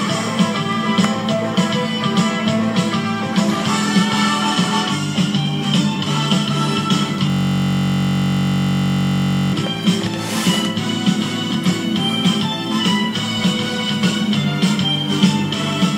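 From 7.30 to 9.53 s, a system hang loop: the system froze while the hardware kept replaying one 21.33 ms stretch, which fits a 1024-sample buffer. It's a steady 46.9 Hz buzz; the waveform repeats identically, and the spectrogram shows evenly spaced horizontal harmonic lines.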